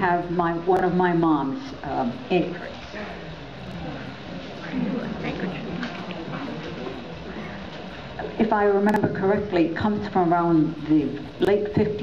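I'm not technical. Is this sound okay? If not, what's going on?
No. There are four jumbled blips, at 0.77, 3.67, 8.89 and 11.40 seconds. This is chunks out of order. Audio moves in tiny pieces of about 23 ms. Each time, one piece played late, one or two pieces behind. Nothing is lost.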